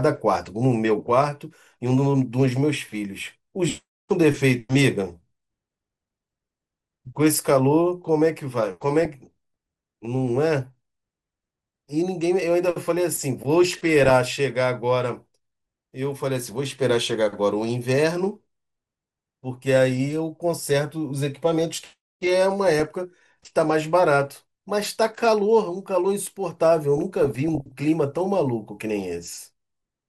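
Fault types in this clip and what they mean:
MP2 compression: The speech sounds as if it has likely passed through an MPEG Layer II encoder running short of bits, at a rate that points to roughly 80 kbps. Starved of bits, the coder drops upper sub-bands and coarsely quantises the rest, so the top end is dulled and flickers, and a granular, gurgling roughness sits on the speech throughout the clip. The damage is plainly audible.
DAB burbling: Bit errors from weak reception have slipped past error correction into the MP2 data, corrupting samples so single sub-bands get short blips of noise, and where scale factors are hit, sub-bands leap in level for up to a frame. In this clip that gives bursts of burbling over the speech at 0.96, 9.03, 13.65, 16.44, 22.72 and 26.98 s. Most are brief, but the one from 26.98 to 27.81 s is longest.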